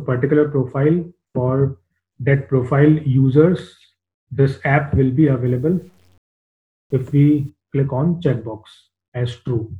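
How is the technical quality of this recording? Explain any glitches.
One stretch of the recording is degraded; the rest of this answer concerns that stretch alone.

Low bit depth without dither, from 5.46 to 7.49 s: the sound turns grainy, with an error floor around 40 dB below the signal. The likely cause is a requantisation to very few steps, consistent with about 9 bits, by truncation with no dither. Because the rounding error tracks the waveform rather than being randomised, it comes through as distortion riding on the sound instead of as a neutral hiss.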